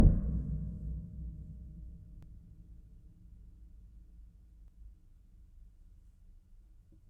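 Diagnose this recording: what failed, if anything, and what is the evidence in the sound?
Audio missing between chunks at 2.23 s and 4.68 s: the sound skips abruptly, losing a few tens of milliseconds each time, likely where a buffer stage dropped audio between roughly 2.5-second chunks.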